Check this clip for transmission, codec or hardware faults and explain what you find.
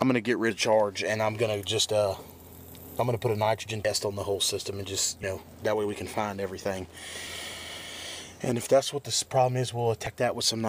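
The clip has one fault, compressed frames skipped, at five points: 0.50, 1.81, 3.84, 7.27 and 10.06 s. At each, the sound lurches forward with a short smeared blip rather than a sharp click. The jumps lose roughly 100 ms, 50 ms, 70 ms, 50 ms and 70 ms of audio. The cause is whole compressed frames that were missing or rejected by the decoder. The jumps fit multiples of a 26.1 ms frame, and the overlap between frames softens each join.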